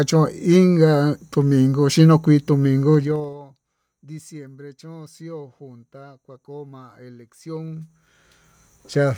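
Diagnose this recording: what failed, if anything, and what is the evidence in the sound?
Zipper noise from unsmoothed, buffer-stepped gain: at 2.94–3.37 s the level falls about 25 dB in 2 dB steps, and at 7.42–8.62 s it rises about 25 dB in 1 dB steps, some twenty a second. Spectrograms show evenly spaced thin vertical clicks, and the waveform shows a staircase envelope.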